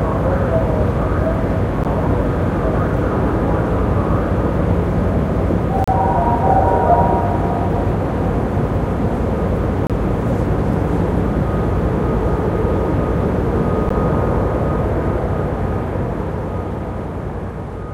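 At 1.84 s, 5.84 to 5.88 s, 9.87 to 9.90 s and 13.89 s, hard-edged silences of 12 to 33 ms cut the sound every 4 s. This is a gap between stream segments: the segments' timestamps leave a hole that is played as silence, with no audio lost.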